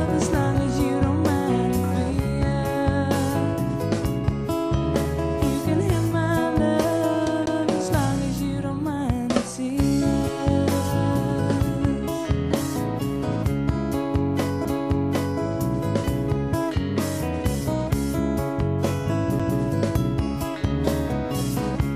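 At 7.46 s, 14.65 s and 19.39 s you get a CD skip. The laser lost its track and jumped to another turn of the spiral, so there's a tiny mute, about 10 ms the first time and just a few milliseconds after that, with a tick and an abrupt jump in the sound.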